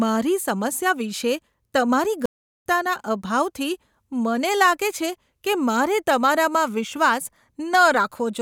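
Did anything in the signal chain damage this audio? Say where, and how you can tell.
Yes. A playback stall hits the speech from 2.26 s to 2.66 s. The sound cuts off in mid-flow and the output drops to silence for about 0.40 s before the speech resumes. That gap is too long and too abrupt to be a natural pause. The stage is playback, and the likely cause is the player running dry of buffered data, or its output thread being held up, so nothing reached the output until it recovered.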